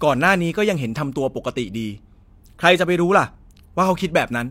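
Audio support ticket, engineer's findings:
No faults found in the speech recording on review. No symptom to attribute to any component in the signal chain.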